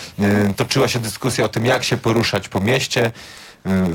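From start to end, a block size mismatch (padded) pads the end of each block with silence, making a buzz near 93.8 Hz and slowing the audio to 0.938 speed, which fits 512-sample reads.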